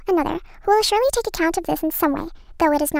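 Speech, and the whole thing's hit by a wrong sample rate: it runs about 1.38 times fast and roughly 5.5 semitones sharp, which fits 32 kHz audio played at 44.1 kHz.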